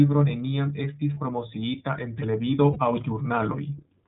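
A speech clip carried throughout by the iLBC codec. Nothing above 4 kHz survives, and the voice has a plainly rough, slightly synthetic edge that points to iLBC's 13.33 kbps mode with 30 ms frames. It is coded excitation rather than the smeary, watery band-limiting of a low-bitrate MP3. There are also lost iLBC frames at 1.14 to 1.19 s, after "neniam estis" and before "promociita en televido aŭ", and at 2.73 to 2.77 s, after "estis promociita en televido". Each gap is about one 30 ms frame, filled with a briefly held, faintly buzzy repeat of the last pitch cycle. Because each frame decodes independently, the voice snaps back immediately instead of staying smeared for several frames, as it would with a codec that depends on earlier frames.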